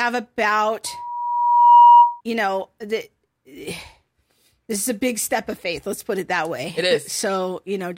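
From 0.86 to 2.21 s a loudspeaker feedback squeal rises at 959 Hz, ending just before "you know the". The microphone re-amplifies its own loudspeaker, swelling over about a second to roughly 15 dB above the speech, drawn as one brightening horizontal spectrogram line and a ballooning waveform envelope.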